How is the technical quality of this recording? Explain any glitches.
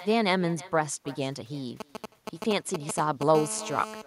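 The quality is poor: the speech is shadowed by echo throughout, and a nearby mobile phone intrudes twice.

Echo with no canceller: every phrase returns roughly a third of a second later, about 20 dB quieter, because the far-end loudspeaker feeds its microphone unchecked.

GSM signalling bursts, 1.80 to 3.23 s: a galloping dit-dit-dit of short 217 Hz buzzes, nearly as loud as the speech, as the audio circuit rectifies a nearby 2G phone's intermittent signalling bursts.

GSM phone buzz, 3.35 to 4.02 s: a steady, raspy 217 Hz buzz rich in harmonics, about 11 dB below the speech, from a 2G phone transmitting in bursts during a call.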